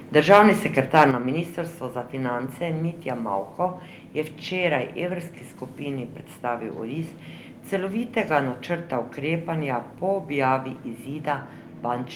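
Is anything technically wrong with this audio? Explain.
Yes. The speech has two related problems right at the start.

From 0.95 to 1.03 s there is microphone overload. The loudest syllable turns harsh and crackly. Its peaks go about 4 dB past the converter's limit, and their tops are flattened. Only a small share of samples is affected. The likely cause is an input volume set too high, so the converter runs out of range on the peaks.

At 1.11 s the microphone volume is stepped down. Voice and background both drop by about 6 dB in one sudden step. Nothing fades. The level just falls and stays lower. This comes right after the distorted peak. That timing points to call software that detected the clipping and cut the device input gain once. This is likely the cause.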